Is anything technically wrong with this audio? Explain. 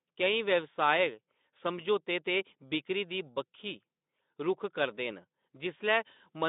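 No, nothing in this speech clip stood out as a technical problem on listening.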